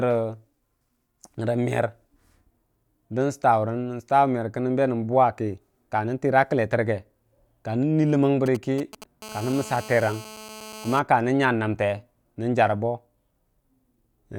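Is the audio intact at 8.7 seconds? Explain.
No. From 8.46 to 9.04 s, GSM signalling bursts from a nearby 2G phone are picked up and rectified by the audio circuit, so a galloping dit-dit-dit of short 217 Hz buzzes sits roughly 15 dB below the speech.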